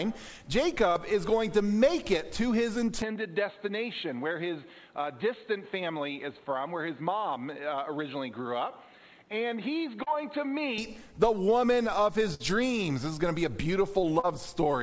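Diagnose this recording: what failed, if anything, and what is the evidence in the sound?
Network, short concealed packet loss: brief smears at 0.92–0.98, 10.03–10.09 and 14.20–14.26 s, where about 40 ms of audio is missing and the decoder extrapolated the preceding sound.

Capture stage: from 3.02 to 10.78 s the sound turns dull and boxy, with nothing above 4.3 kHz, about 5 dB quieter, and a new noise floor roughly 35 dB down. The likely cause is the input switched to a poorer device.

Network, burst of packet loss: at 12.34–12.43 s the receiver stretched the last sound and faded it, then resumed with about 40 ms of audio missing.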